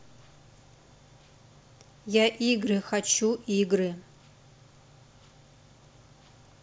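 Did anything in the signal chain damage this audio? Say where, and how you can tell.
No, nothing I can hear in this speech points to trouble at any stage of the chain.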